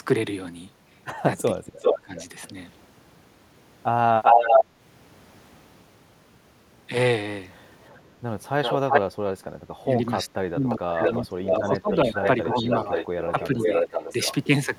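From 1.54 to 2.14 s the speech sinks by about 25 dB for roughly half a second, dipping and breaking up. This is likely speech suppressed in double talk: with both sides talking, the echo canceller mistook this talker for loudspeaker echo and turned everything down. Overlapping it, from 1.83 to 2.2 s, a delayed copy of the voice trails about 391 ms behind, roughly 5 dB louder than the speech itself. This is likely an echo leak, where a loudspeaker's output reached the far end's microphone, slipped past its canceller and was sent back. The same 391 ms echo returns at 4.23 to 4.65 s (about 10 dB above the speech), at 7.84 to 8.01 s as a faint trace about 30 dB down, and at 8.63 to 9.01 s (about 5 dB above). Between 9.84 and 12.92 s the speech is cut again, up to about 25 dB and for around 2 seconds in total. From 10.7 to 14.35 s a longer echo runs at a 513 ms delay, level with the speech. Inside that stretch, 13.32 to 13.8 s brings a milder dip of about 5 dB.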